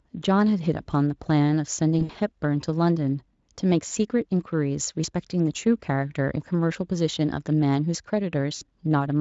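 At 1.99 to 2.17 s, 3.87 s and 8.55 to 8.64 s, VoIP packet loss is concealed by the speech codec. The decoder stretches the last sound into a buzzy tone or coloured noise that fades, and the gaps total about 120, 40 and 60 ms.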